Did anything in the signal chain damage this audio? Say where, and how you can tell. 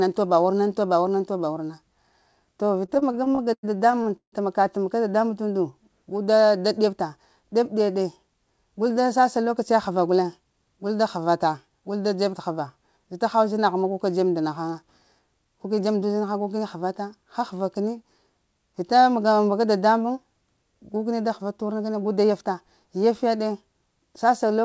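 Yes, at the network and jitter-buffer stage of what sounds like a G.722 call path, with nothing above 8 kHz. Two kinds of fault are audible. From 2.86 to 4.34 s there are repeated stalls (stutter): fifteen short hold-ups, the longest 160 ms, where the last sound is stretched and faded while the buffer waits for late packets. Nothing is actually lost, which distinguishes this from dropouts.

Jitter buffer speed-up appears at 6.80–7.44 s, at 14.71–16.24 s just after "ka dzeb nda na", at 18.30–19.40 s, and at 21.43–22.44 s. In each, the speech runs at 108% (111% in the last) while the pitch stays the same, because whole pitch periods are being trimmed. A resampling fault would raise the pitch as well.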